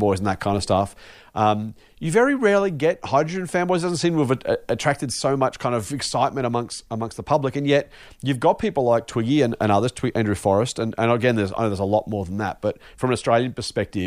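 No technical faults are audible.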